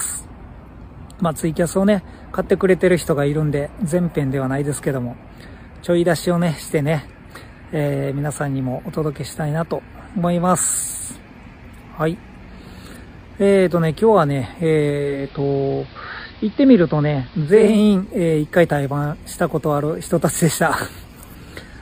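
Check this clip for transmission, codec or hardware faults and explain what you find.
One fault, digital radio blending to analogue, from 14.88 to 17.87 s. With the digital stream lost, the receiver cross-fades over 0.45 s to AM, cutting the treble and adding hiss about 25 dB below the signal. A spectrogram shows a hard ceiling and a raised noise floor, and the waveform level stays unchanged.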